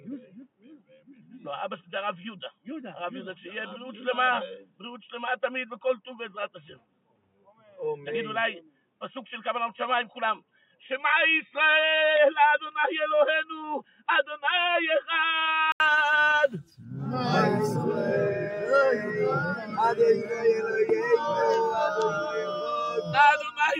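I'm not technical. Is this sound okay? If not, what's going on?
No. The recording likely started on a poorer input device, so until 15.8 s the sound is dull and boxy, with nothing above 3.8 kHz. At 15.8 s there's a brief 80 ms gap, then it clears up at about the same loudness.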